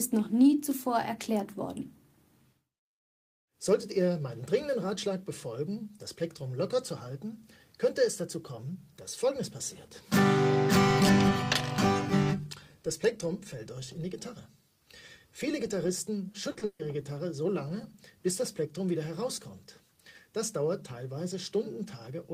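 At 16.51 s and again at 16.59 s there are two instances of short concealed packet loss, about 40 ms and 20 ms long. Each time a sliver of audio arrived too late for the decoder, and the receiver papered over the hole by extending the preceding sound before blending back into real audio. Each is heard as a momentary smear or wobble. What separates them from the next fault is brevity: the sound stays continuous and only a fleeting detail goes missing.

Immediately after, from 16.65 to 16.81 s, comes a burst of packet loss spanning about 140 ms with no outright silence. Here several consecutive packets were lost, so the concealment had to stretch the last sound much further, letting it sag in level as the gap wore on. Instead of a smear, there is a held, decaying tail, and when the audio resumes, a whole stretch of content has been skipped rather than merely blurred.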